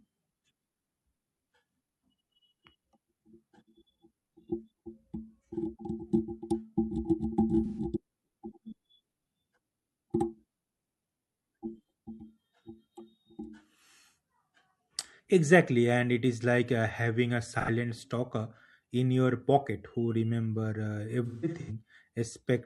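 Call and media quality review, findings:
Smeared, noisy patches in the speech at 7.66–7.78 s (about 128 ms, fits three lost AAC frames) and 17.54–17.69 s (about 85 ms). AAC frame loss with concealment: decoder rebuilds gaps from the last good spectrum. Worse at 21.26–21.71 s: broken-up, phasey stretch, losses scattered over about 430 ms, longest run around 150 ms, concealment repeating stale spectra. Component: AAC decoder downstream of lossy transport.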